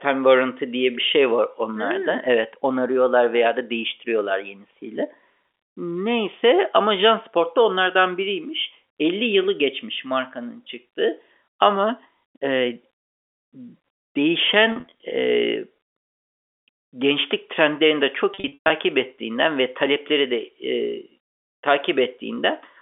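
Packet loss with pitch repetition hits at 14.72–14.92 s, then 18.34–18.70 s between "gençlik trendlerini de" and "ettiğinden ve talepleri". The receiver loops the last pitch period over the gaps, giving short buzzy holds. The second, with runs up to 120 ms, fades toward silence before speech cross-fades back.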